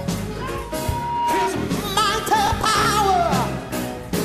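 From 0.60 s to 1.53 s a loudspeaker feedback squeal rises out of the sound: a single tone at 951 Hz that swells for well over half a second until it sits at roughly the same loudness as everything else. A microphone is hearing its own loudspeaker, and at that one frequency the loop gain exceeds one. Unlike a steady hum or test tone, it starts from nothing and grows by itself, then stops.

From 2.46 s to 2.86 s comes processor overload crackle, a gritty tearing laid over the sound. The processor is falling behind on small buffers, which fits blocks of about 10 ms. Around twenty deadlines are missed over the stretch, and each miss replays a scrap of old audio with hard edges. It differs from clipping distortion because it is a run of tiny repeated fragments with clicks at their joins, and it ends cleanly when the load passes.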